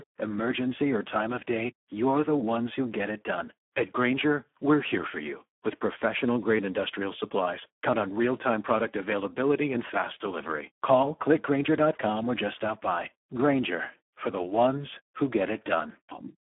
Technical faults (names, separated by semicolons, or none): Speex codec